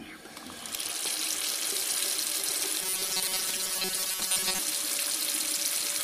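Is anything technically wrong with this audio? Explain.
Yes. From 2.82 to 4.60 s there is robotic sound from repeated short buffers, likely because new audio arrived too seldom and the playback filled the gap by replaying a chunk of about 5 ms. Most of the material there is repeats, forcing a rigid metallic buzz at 188 Hz.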